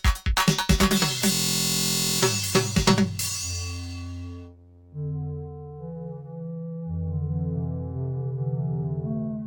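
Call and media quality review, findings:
System hang loop, 1.32–2.21 s, music. The host or audio driver stalled while the output hardware kept replaying its ring buffer, consistent with a 1024-sample buffer. A single 23.2 ms slice repeats 38 times, heard as a steady buzz at 43.1 Hz in place of the music. Playback resumes with little or no audio lost: the music picks up where the stall began.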